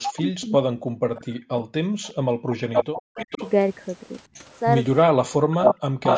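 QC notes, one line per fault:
0.0–1.65 s, 2.48–3.41 s, 5.12–6.06 s: speech suppressed in double talk. The speech dips by as much as roughly 40 dB and breaks up in pieces, likely because the echo canceller turned down the talker while the far side was also speaking.
1.93–2.2 s: background gated by the echo canceller. The room sound drops by about 40 dB for a brief moment, then returns once the canceller releases the microphone.
2.03–2.1 s, 2.76–3.51 s, 4.35–4.59 s, 5.52 s to end: echo leak. A delayed copy of the speech returns, 364 ms late in the first instance and 459 ms late in the rest. It is faint at 2.03 and 4.35 s, near speech level at 2.76 s, and slightly above it from 5.52 s. The likely cause is that the far side's loudspeaker pickup was not fully cancelled.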